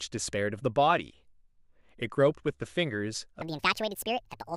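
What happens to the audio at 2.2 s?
Nothing goes wrong at 2.2 s; the speech runs on intact through that moment, with no dropout, click or distortion to be heard.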